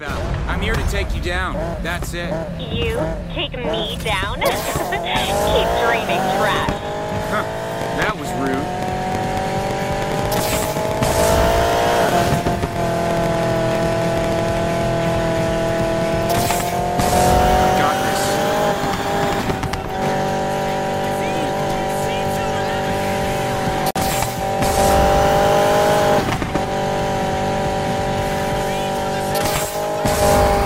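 A pulse source, most likely interference from nearby equipment or a faulty connection or power supply, fed a train of clicks into the signal from 7.82 to 14.58 s. Around 70 near-identical pulses arrive at roughly 9.5 per second on an uneven beat. Peaking about 10 dB above the sound, they come through as a ragged ticking and popping that sits on top of the audio and carries straight through its quieter stretches.

At 23.91 s, two separately encoded pieces were joined without trimming the encoder's start-up delay and end-of-frame padding, so the silence from both remains and leaves a gap at the join of the encoded pieces. A 50 ms hole opens in continuous sound and lasts until 23.96 s. Its edges are smeared by the codec, and the audio picks up exactly where it broke off.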